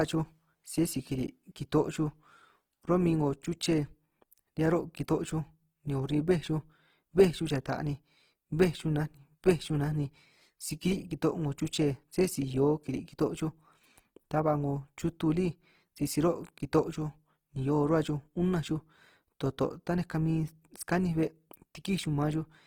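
Throughout this speech clip the sound is rough and grainy, with a noisy texture and content reaching about 20.2 kHz, likely Opus compression in music mode at a low rate, roughly 16 kbps.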